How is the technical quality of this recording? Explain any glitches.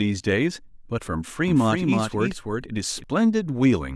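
The recording has one glitch. From 1.48 to 3.04 s there is a doubled audio track. A second, full-band copy of the speech trails about 300 ms behind, roughly 5 dB quieter, with no room decay. It starts and stops abruptly. The likely cause is a slower second capture path or misaligned edit copies.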